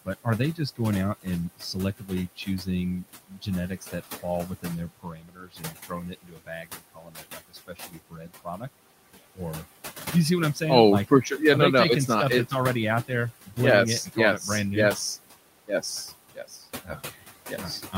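Noise suppressor artifacts run through the whole of this speech clip: the suppressor pulls the steady background down by about 16 dB frame by frame, so the room noise, which sits only about 14 dB below the speech, sinks in the pauses and swells back under each phrase, since the noise and the speech share bands the processor cannot fully separate. Speech cut by the noise suppressor comes on three occasions, from 0.05 to 8.64 s, from 13.08 to 14.41 s between "not that's already out" and "it brand new", and from 15.68 s to the end. In each case the suppressor misjudges quiet speech energy as noise and turns it down along with the background, by as much as about 19 dB in the first stretch and about 15 dB in the later two, so soft consonants and word endings come out swallowed or faint, adding up to roughly three seconds of the opening span and only a brief moment in the middle one.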